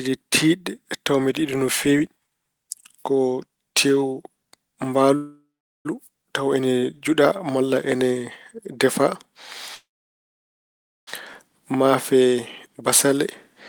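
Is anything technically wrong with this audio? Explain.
Yes, there are two call audio freezes and a jitter buffer speed-up. From 5.15 to 5.87 s and again from 9.75 to 11.09 s the speech stalls. The last sound smears into a fading buzz, then silence (about 0.4 s, then about 1.2 s). This is likely packets held up in transit, draining the jitter buffer. Speech resumes where it stopped, with nothing lost.

From 11.83 to 13.18 s there's a jitter buffer speed-up. The receiver trims tiny pitch-period slices, roughly 150 ms in all, to shed the built-up delay. Speech runs about 9% fast at the same pitch and sounds a bit hurried.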